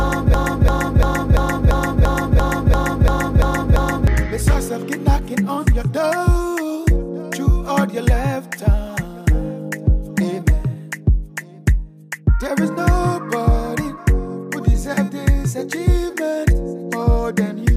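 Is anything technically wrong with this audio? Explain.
Yes. From the very start until 4.07 s the audio is caught in a broken-record loop that is already under way when the clip begins. A fragment of about 0.34 s repeats exactly, back to back, 11 times, producing a rigid, stuttering cycle with no forward progress. The likely cause is a player, encoder or stream that stalled and kept re-sending its last held fragment. Whatever should have played during those four seconds is missing.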